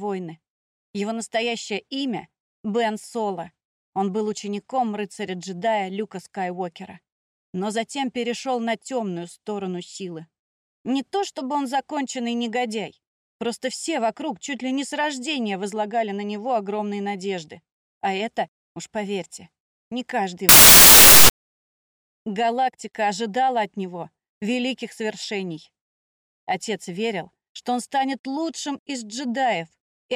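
Around 20.49 s the audio suddenly turns into a blast of loud, harsh broadband noise, and it stays that way until about 21.52 s, so roughly a second. That's samples built from the wrong bytes: the reader got the byte order or alignment wrong, so the quick-changing low bits of each sample ended up as the big, significant part of the value. What comes out is basically loud, harsh noise.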